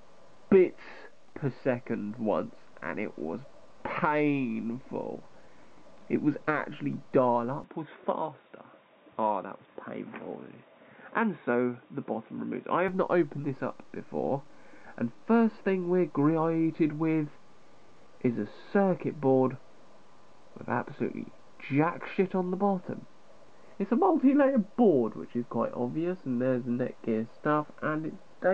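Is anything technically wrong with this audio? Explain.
Yes. From 7.64 to 12.88 s the sound turns boxy, with nothing above 3.8 kHz. The input was likely switched to a poorer device. A faint new noise floor separates it from a plain filter.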